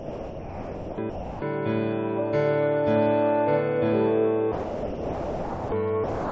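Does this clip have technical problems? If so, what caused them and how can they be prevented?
Yes. The music gives way to steady, even noise at 0.0–0.98, 1.10–1.42, 4.52–5.72 and 6.04–6.31 s, likely sound dropped by the voice detector, which treated the music as background and substituted comfort noise. Unlike packet-loss gaps, these stretches have no stutter or smeared repeats, only a flat noise bed. Disabling voice activity detection or discontinuous transmission for music would prevent it.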